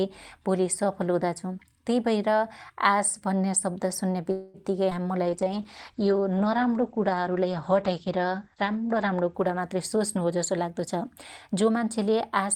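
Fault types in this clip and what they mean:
Call audio freeze: From 4.31 to 4.57 s the last sound is stretched into a fading buzz for about 0.23 s, likely because delayed packets drained the jitter buffer. The speech then resumes where it stopped. Unlike packet loss, nothing is dropped; a gap is inserted.
Short concealed packet loss: At 4.90 and about 5.03 s, roughly 40 ms of audio each time never arrives. It is patched with a brief synthetic continuation that blends back in, heard as a quick smear. Unlike the freeze, real audio is lost here and the fill lasts only hundredths of a second.
Jitter buffer slow-down: From 5.07 to 5.49 s the receiver repeats tiny pitch-period slices, adding about 55 ms and running the speech at 88% speed. Pitch stays unchanged, so the sounds are drawn out. A freeze, by contrast, stops the audio outright instead of stretching it evenly.
Call bitrate drop: From 5.27 to 10.28 s the speech turns coarse and watery. 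The top end is cut from 20 kHz down to 8 kHz for about 3.5 s at the worst point, which fits a fall from 48 to 12 kbps. Timing and pitch are untouched; only the tone quality degrades.
Jitter buffer speed-up: From 9.75 to 11.06 s the receiver trims small pitch-period pieces, about 150 ms in total, running the speech at 111%. From 11.49 to 12.41 s it trims about 50 ms more at 105%. Pitch holds steady, so the speech sounds hurried. This is the opposite of the earlier slow-down.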